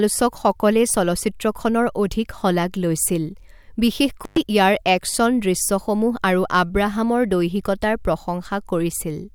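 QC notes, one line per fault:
4.24–4.38 s, intermittent contact: the speech cuts out for about 110 ms as a loose plug or cable briefly opens the line. Crackle at both edges and faint hiss through the gap, not clean digital silence, separate it from a packet dropout.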